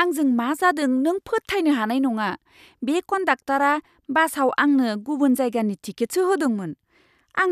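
Listening to the speech recording, nothing stood out as a technical fault at any point.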